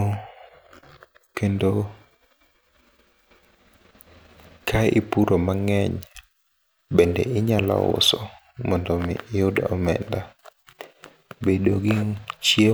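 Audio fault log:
No faults are audible anywhere in this speech recording.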